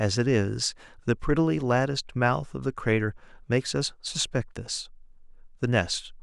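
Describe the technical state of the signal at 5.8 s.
At 5.8 s the speech signal is intact, with no audible fault at that moment.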